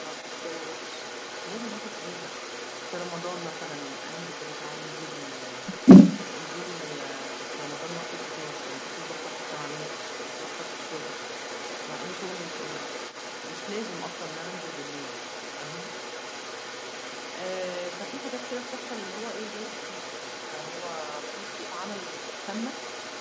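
From the first moment to the end, an echo leak runs through the speech: a second copy trails each phrase by about 223 ms, roughly as loud as the original, so syllables smear into a doubled, hollow repetition. The likely cause is a far-end loudspeaker whose echo canceller let its microphone pickup slip back into the call. On a spectrogram, every harmonic pattern reappears shifted right by that fixed gap. The waveform shows paired bursts, and all energy stops near 8 kHz, consistent with a G.722 wideband call.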